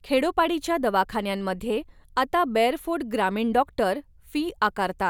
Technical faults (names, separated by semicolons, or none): none